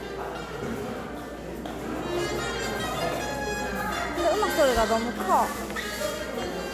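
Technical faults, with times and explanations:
Nothing technical stands out here; the sound just rolls along without any trouble worth noting.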